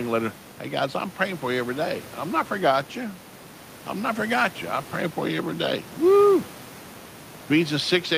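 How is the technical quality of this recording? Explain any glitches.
No glitches are audible here.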